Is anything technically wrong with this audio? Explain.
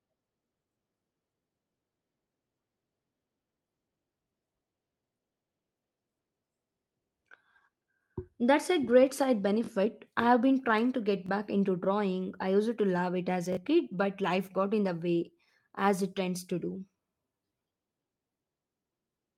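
Yes, there is a repeated buffer fault. Short stutters occur at 9.64 to 9.69 s, 11.26 to 11.29 s and 13.53 to 13.57 s. At each one, a tiny slice of sound of about 21 ms plays again with hard joins. It repeats twice at the first and third points and once at the second. Each slice matches a 1024-sample buffer. Fresh audio arrived late, so the device replayed its last buffer, and roughly 20 to 40 ms of real sound was lost each time.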